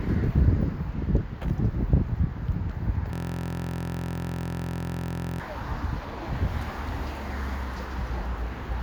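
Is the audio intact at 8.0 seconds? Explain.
Yes, at 8.0 seconds the sound plays through intact, with no dropout, click or other fault at that point.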